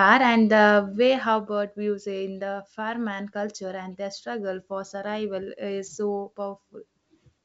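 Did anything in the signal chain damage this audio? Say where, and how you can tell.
No, nothing in the signal chain damaged this audio.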